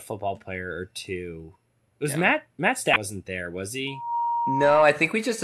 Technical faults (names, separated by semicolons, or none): damaged data in a compressed stream; loudspeaker feedback squeal